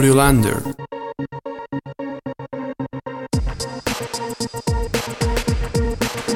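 No technical faults are audible.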